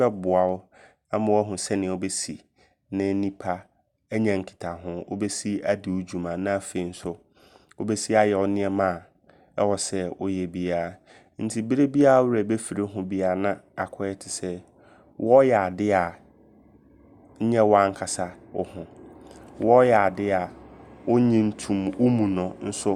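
No technical faults can be heard anywhere in the recording.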